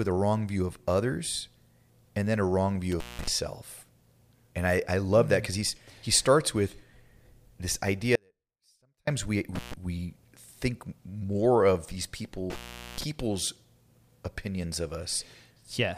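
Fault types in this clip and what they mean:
Intermittent contact: a loose plug or cable connection breaking and remaking, so the speech cuts out with crackle at each edge and only faint hiss while the line is open. It happens three times. Just after "and then a wrong" at about 2.92 s it opens for about 186 ms. At about 9.55 s a 131 ms break comes just before "we think more of". After "think more of these" at about 12.50 s the longest opening lasts about 422 ms.
Audio dropout to a faint residue: the speech vanishes abruptly from 8.16 s to 9.07 s, a gap of about 0.92 s, and comes back just as suddenly. This is not a pause or fade. The gap is not silent. A faint sound remains at roughly 40 dB below the normal level of the speech, which shows that the path after the break stayed live. The likely cause is the wanted signal being lost upstream while the later stages kept passing what was left.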